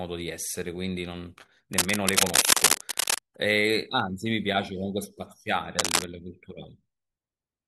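Cable scratch noise shows up from 1.72 to 3.22 s and again from 5.76 to 6.04 s: bursts of gritty rustling that sit a few dB above the speech. It's likely a worn cable or connector being moved, its contact flickering and spraying noise into the signal.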